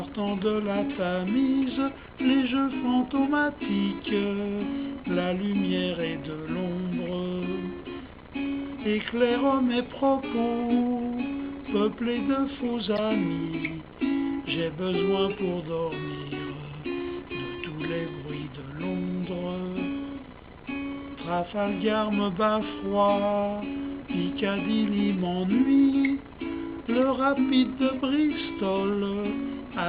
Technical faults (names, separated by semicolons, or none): damaged data in a compressed stream